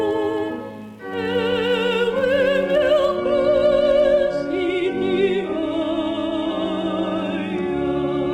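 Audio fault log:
3.16 to 8.34 s, adaptive stream at a lower bitrate: the sound switches abruptly, with no gap, to a dull version with nothing above 11.8 kHz and more codec artefacts. The stream fell back to a much leaner encoding, which fits a drop from roughly 96 kbit/s AAC to 16 kbit/s HE-AAC.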